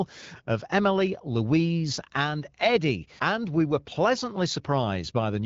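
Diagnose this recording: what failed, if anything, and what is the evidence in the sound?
Nothing failed; the speech comes through AMR wideband intact.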